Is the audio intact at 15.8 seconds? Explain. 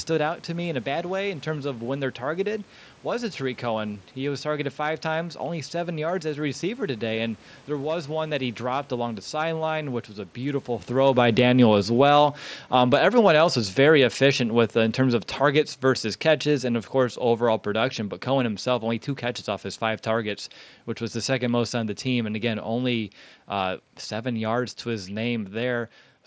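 No. At 15.8 seconds the audio is inside an automatic gain falling span, from 10.92 to 25.87 s. The gain control judged the input too loud, or its background noise too strong, and kept easing its gain down, by about 16 dB overall. The speech and room noise sink together.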